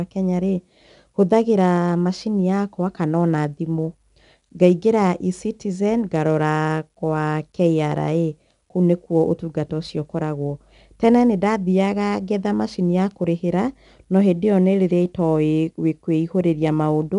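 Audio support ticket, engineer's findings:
4-bit ADPCM compression, whole clip. Gritty hiss riding every loud speech syllable, harsh on sharp onsets where step size lags. Spectrogram: broadband noise floor rising and falling with level, nothing above 10.7 kHz. Fits roughly 88 kbps, low sample rate.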